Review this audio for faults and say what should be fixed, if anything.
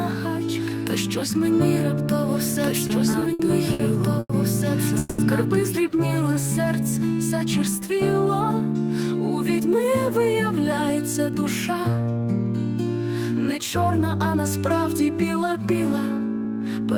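A doubled audio track runs from the start until 5.77 s, already under way as the clip opens. A second full-band copy sits roughly two seconds behind, about 5 dB quieter, with no room colour, and cuts off abruptly. The likely cause is a second, slower capture path being mixed in. Route the source through only one capture path.

Repeated stalls (stutter) occur between 2.87 and 4.31 s: six gaps totalling 280 ms, the longest 100 ms. Each time the jitter buffer emptied, the receiver stretched the last sound, so the audio drags and stutters while nothing is lost. Give the jitter buffer enough depth for the network's arrival variance.

A call audio freeze from 4.99 to 5.20 s continues the last sound for 190 ms without dropping to silence. The audio then resumes where it stopped, now 190 ms later. The likely cause is packets held up in transit. Reduce network queuing and burst loss on the path.

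A jitter buffer slow-down between 6.23 and 7.00 s plays at 95 percent speed. Repeated pitch periods add 48 ms, so sounds are drawn out at unchanged pitch. Keep the buffer from running low by holding its target delay steady.

Jitter buffer speed-up occurs at 9.60 to 12.25 s and 13.41 to 14.44 s, both at 105 percent speed. Short pitch-period cuts remove roughly 150 ms and 50 ms, and the audio sounds hurried. Smooth delayed-packet bursts so the buffer does not overfill.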